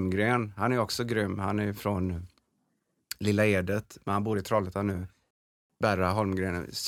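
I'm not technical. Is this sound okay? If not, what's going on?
No. A wireless link likely got interference, so the headphones ran out of buffered audio and had to wait: a Bluetooth stall. The speech drops to complete silence from 5.31 to 5.70 seconds, about 0.4 s, then carries on.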